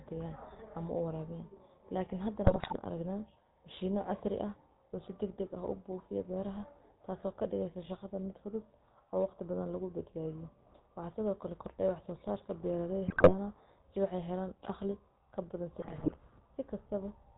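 Speech, and it carries the GSM full-rate codec sound all the way through: a buzzy, gravelly roughness with nothing above 4 kHz, since the vocal tract model is driven by a coarse, regularly spaced pulse excitation, and that damage is plainly audible here. On top of that there are GSM bit errors, around 2.44 to 2.77 s, 13.08 to 13.34 s and 15.80 to 16.18 s, where the voice breaks into squawks and gargling as corrupted filter, pitch and gain values throw frame after frame off.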